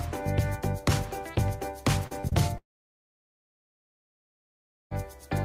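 Between 2.07 and 2.33 s come three bursts of short concealed packet loss, at 2.07 to 2.13 s, 2.21 to 2.25 s and 2.29 to 2.33 s. Each time, roughly 20 to 40 ms of audio failed to arrive and was filled by stretching the preceding sound. These gaps are heard as quick smears or wobbles rather than gaps, because the audio never actually stops.

From 2.57 to 4.93 s the sound falls away into near silence for about 2.3 s before resuming further on, with that stretch missing. This is likely a long network dropout. Unlike the brief patches before it, the concealment cannot bridge a gap this long, so it gives up and leaves an audible hole.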